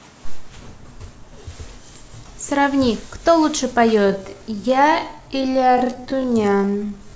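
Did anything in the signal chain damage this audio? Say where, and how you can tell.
Yes. From 3.92 s to the end of the clip, the speech abruptly drops to roughly 0.57 times its original pace while the pitch stays where it was. This is a time-stretched section, likely introduced by software at the processing or playback stage to fit the audio to a longer duration. To slow it without lowering the pitch, the algorithm repeats short slices of the waveform, which is why the stretched part drags.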